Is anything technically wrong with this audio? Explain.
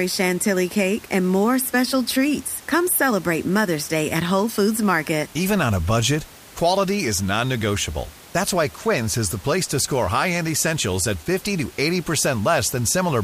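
No, nothing technically wrong stood out on listening to this speech recording, and the faint room noise sits about 23 dB below the speech as part of the recording itself.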